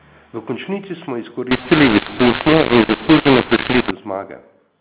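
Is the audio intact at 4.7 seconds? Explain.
Yes, the speech is intact at 4.7 seconds, carried through ordinary G.711 telephone coding with nothing above 4 kHz and no break, dropout or other fault at that moment.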